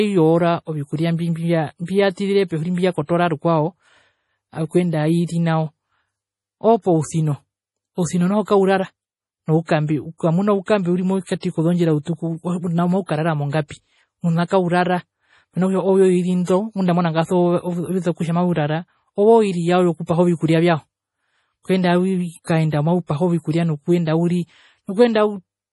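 Across the whole speech clip the treble stops dead at about 11.5 kHz, and the sound has a heavy watery, swirling quality, with sibilants turning metallic and chirpy. This is likely MP3 compression, pointing to a low bitrate of around 32 kbps. A starved encoder drops the top band and zeroes weak frequency lines frame by frame. On a spectrogram this shows as a flat ceiling at 11.5 kHz, with patchy, blocky holes flickering below it.

Pre-echo occurs three times. From 2.12 to 2.17 s, right after "ovikuria mbi mbia", a short hiss lasting about 57 ms leads into the next attack, which sounds softened. From 11.23 to 11.27 s, between "noukambe ukamuna oukambe uri" and "kozondjira utuku ouna maukarara", the smear lasts about 44 ms. From 14.45 to 14.51 s, after "ouna maukarara mongapi mena", it lasts about 58 ms. Each time, the codec has spread noise meant for a loud onset across its whole block, including the quiet moment before it. 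The waveform shows a low fuzzy ramp ahead of each attack, and the spectrogram shows a faint broadband smudge just before the onset.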